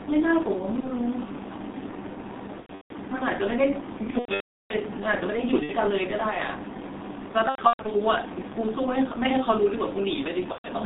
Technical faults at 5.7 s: G.723.1 codec; VoIP packet loss concealed by the speech codec

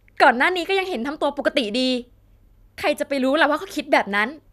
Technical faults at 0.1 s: none

